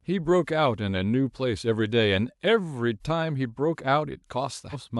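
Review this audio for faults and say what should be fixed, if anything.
At 4.72 to 4.76 s the speech jumps ahead: compressed frames skipped, losing roughly 150 ms, about three frames of 46.4 ms each. Preventing it means checking file integrity and repairing or re-encoding damaged frames.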